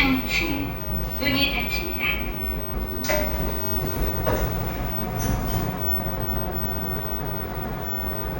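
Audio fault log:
No faults are audible.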